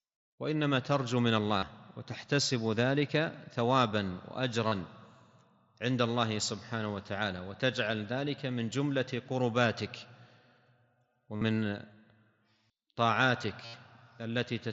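Concealed Bluetooth headset packet loss shows up four times, at 1.58 to 1.63 s, 4.68 to 4.72 s, 11.36 to 11.41 s and 13.65 to 13.74 s. Each time, packets between headset and phone went missing for roughly 40 to 80 ms. The receiver filled the gap by looping the closest-matching bit of the preceding audio, so you get a short buzzy, held tone at full level and a little warble as the real signal comes back. The last one is longest. All of this sits on top of the mSBC headset link.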